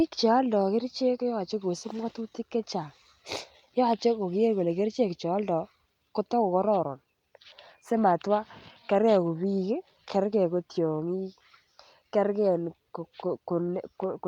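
No technical faults are audible anywhere in the recording.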